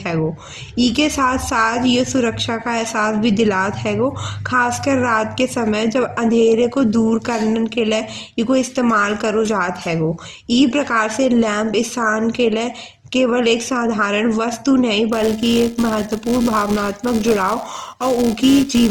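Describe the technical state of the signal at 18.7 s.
At 18.7 s, two faults are present. A filter restarted on every block runs from 15.13 s to the end at 18.9 s. Each block starts from silence, adding a small transient. The result is a steady 375 Hz buzz that tracks the speech level, which fits a 128-sample block.

Opus compression affects the whole clip and is plainly audible here. The speech sounds rough and grainy rather than swirly. Content reaches up to 20.2 kHz, which fits the CELT music mode at likely around 24 kbps.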